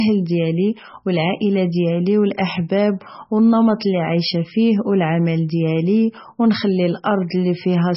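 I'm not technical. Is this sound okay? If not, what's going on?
No. From start to finish the speech sounds dull and watery, with a swirling, bubbly quality on top. Nothing above about 5.6 kHz survives, so s sounds are blunted and may chirp. This is likely heavy MP3 compression: the file was squeezed so hard that the encoder cut off the treble and let quiet details flicker in and out. That flickering, swirly texture is what sets it apart from simple muffling, which only sounds darker.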